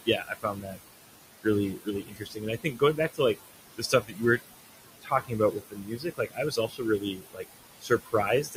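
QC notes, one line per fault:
Throughout: noise suppressor artifacts. The suppressor judges the room noise, which sits about 12 dB under the speech, to be steady noise and pulls those bands down by about 19 dB, frame by frame. Between phrases the background sinks away, then swells back under each stretch of speech, so the noise floor seems to pump.
0.06–0.78 s, 1.74–2.45 s, 2.61–3.4 s, 3.76–4.41 s, 5.02–7.45 s, 7.8–8.14 s, 8.43–8.56 s: speech cut by the noise suppressor. The suppressor mistakes quiet parts of the speech for background and turns them down with it. Most drops are about 18 to 21 dB, and the last one is milder at about 12 dB. Soft consonants and word endings sound swallowed or faint. The losses total about 1.6 seconds in the early runs and about a second and a half in the long run from 5.02 s.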